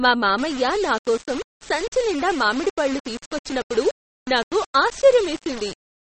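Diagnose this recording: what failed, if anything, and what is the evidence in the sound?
The codec stage is where it first went wrong. Nothing's left above 8.4 kHz, and the speech has that watery, swirly edge with smeared onsets throughout. That's MP3 compression starved of bits, likely at something around 33 kbps, dropping weak frequency lines frame to frame.

Then there's a sample-format conversion problem from 0.38 s to the end: low bit depth without dither. The speech turns gritty, with grain that tracks the level, sitting roughly 15 dB under the signal. That fits likely rounding down to about 5 bits with no dither.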